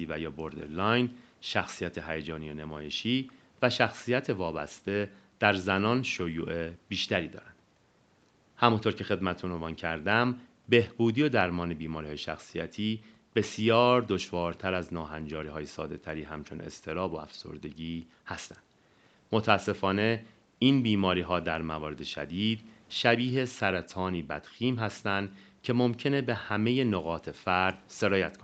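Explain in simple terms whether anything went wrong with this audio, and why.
Nothing went wrong with this speech recording. It went through a normal call connection and microphone processing, which leave out sound above about 8 kHz, so it has the slightly narrow, phone-call quality you would expect.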